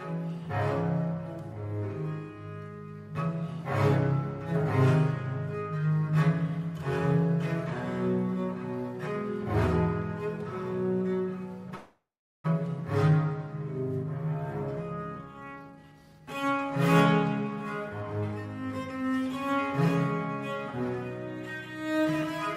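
Packets were most likely held up in transit between 11.75 and 12.46 s, leaving the jitter buffer empty. This is a call audio freeze: the receiver stretches the last sound into a fading buzz for a moment, then about 0.41 s of silence follows before playback picks up exactly where it stopped. Roughly 0.69 s of filler is inserted and nothing is lost, so everything after it is pushed later by that amount.

From 15.15 to 16.77 s the jitter buffer had built up more audio than its target, so it sheds the excess with a jitter buffer speed-up. Short pitch-period slices are cut out one after another, trimming around 0.7 s in total. The audio plays at about 140% of normal speed with its pitch unchanged, so that stretch sounds rushed and clipped together before the pace settles back.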